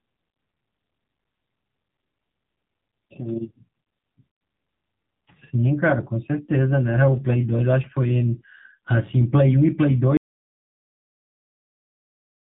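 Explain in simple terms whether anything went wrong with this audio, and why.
Yes, two things went wrong. The whole recording went through the AMR narrowband mobile codec, the squeezed format older phone networks use. It throws away everything above 4 kHz and rebuilds the voice from a rough model, so speech sounds thin, muffled and noticeably buzzy and synthetic throughout.

Then at 10.17 s there is an audio dropout to silence. The input was likely lost, perhaps through a disconnected device or a failed link, while recording carried on. The sound cuts off mid-flow into dead, complete silence that lasts to the end.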